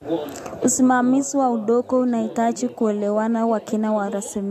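No dropouts, clipping, distortion or timing faults show up anywhere in this speech recording.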